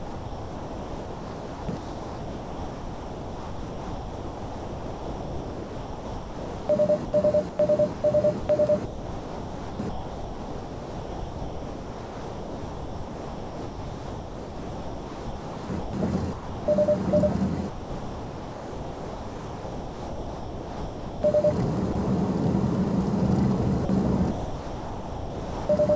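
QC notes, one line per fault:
0.0–16.67 s, sound chopped by the voice detector: the sound repeatedly drops out and returns, with about 14.2 s of this stretch replaced by comfort noise, likely because the sender's detector kept switching transmission off and on.
17.69–21.23 s and 21.93–21.95 s, sound dropped by the voice detector: the sound gives way to steady comfort noise for 3.54 s, then for a 20 ms moment. The sender's detector likely took these passages for background and stopped sending until it triggered again.
23.85–25.69 s, sound chopped by the voice detector: the sound breaks up again, with about 1.4 s swapped for comfort noise, likely from the detector toggling sending more than once. That fill stays within the call path's band, which stops at 8 kHz.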